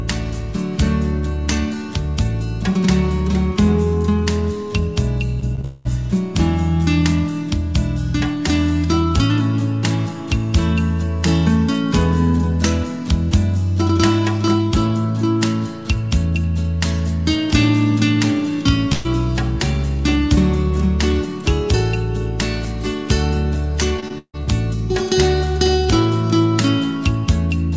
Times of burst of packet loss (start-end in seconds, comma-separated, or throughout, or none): 18.93-19.06